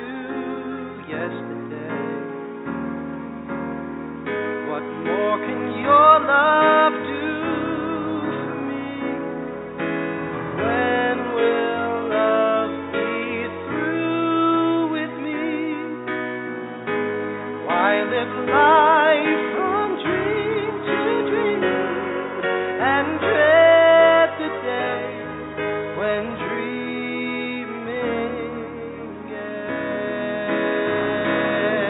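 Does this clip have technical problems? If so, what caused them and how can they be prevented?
No, this clip has no technical problems to point to. Nothing in the audio calls for a fix or a preventive step.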